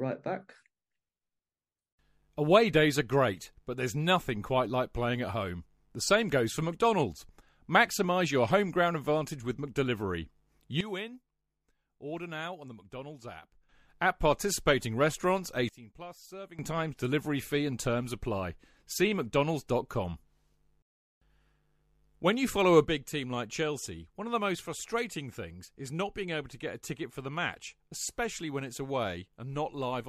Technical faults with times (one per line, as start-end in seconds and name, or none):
10.81-13.69 sudden gain jump
15.69-16.59 sudden gain jump
22.85-30.09 sudden gain jump